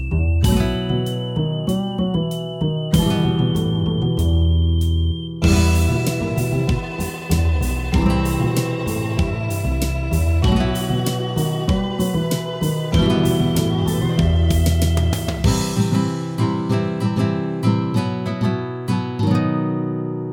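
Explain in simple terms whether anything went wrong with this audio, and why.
Nothing went wrong with this audio, because no technical fault can be heard anywhere in it.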